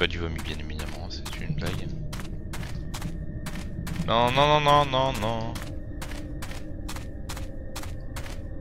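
No technical fault can be heard anywhere in the audio: the signal stays continuous and steady, with nothing that points to a problem in how it was captured, processed or delivered.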